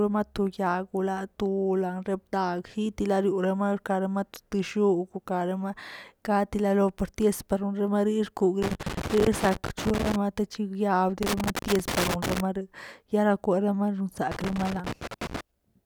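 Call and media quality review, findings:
Loose connector crackle, 8.62–10.16 s, 11.23–12.40 s, 14.32–15.41 s. Irregular bursts of crackle and scratching over the speech, each roughly one to one and a half seconds. Probable component: worn or dirty connector contact. Mechanism: contact making and breaking as it moves, chopping the signal. Recurs three times in the final seven seconds.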